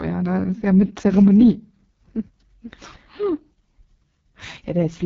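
From start to finish the speech has passed through the AMR wideband (HD Voice) codec, running at its lowest rate; the heavy coding damage fits the 6.6 kbit/s mode. At that rate the pulse-driven model of the vocal tract is too coarse to follow the voice closely, so the speech sounds rough and raspy. The top band is filled with shaped noise instead of real detail, and nothing is present above about 7.5 kHz.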